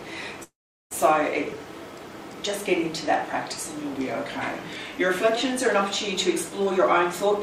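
The audio has three faults. From 0.43 to 0.93 s a call audio freeze inserts a gap: a brief fading continuation, then about 0.39 s of silence, after which the sound resumes with nothing lost, likely because delayed packets let the jitter buffer run empty. From 3.93 to 5.36 s a drift correction step slows playback by 5.7% and lowers pitch by about one semitone (102 cents), likely from clock-matching software adjusting its buffer fill. From 6.59 to 6.79 s a jitter buffer speed-up runs the audio at 131% speed without a pitch change, as repeated short cuts remove around 70 ms to shrink an overfilled buffer.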